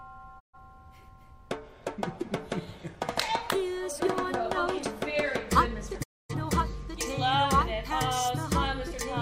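At 0.39 s the sound fades quickly to silence and stays muted until 0.58 s. This is a digital broadcast dropout. The receiver lost good frames and muted rather than play corrupt data. About 128 ms of programme is missing, which fits three lost frames. The fade takes 20 ms. A longer dropout follows from 6.02 to 6.34 s. It loses 256 ms, consistent with six frames. The sound resumes later in the programme, and the muted material never returns.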